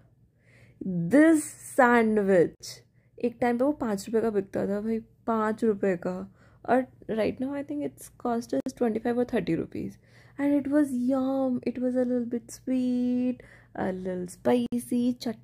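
At 2.55 s the sound drops out for about 52 ms, then again at 8.60 s and 14.66 s for about 60 ms each, a steady six seconds apart. That's a gap at a join of encoded pieces: each chunk went through the encoder on its own, and the start-up delay and padded last frame were left in when they were stitched together. You hear a brief hole with smeared edges, and the sound resumes right where it broke off.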